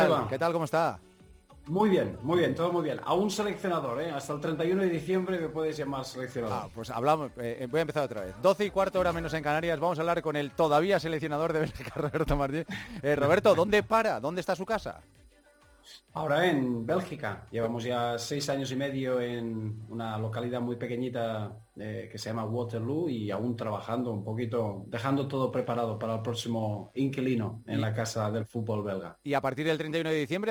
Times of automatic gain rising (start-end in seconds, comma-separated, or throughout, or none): none